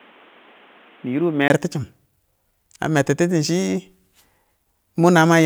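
From the start to 1.5 s, the speech sounds dull and boxy. Nothing reaches above 3.8 kHz. It is also a few decibels quieter, with faint background noise well below the speech. At 1.5 s there is a gap of about 20 ms. Then the sound opens up again. The likely cause is an input switched to a poorer device partway through, such as a headset in call mode. That device passes a narrower band and has its own level and noise.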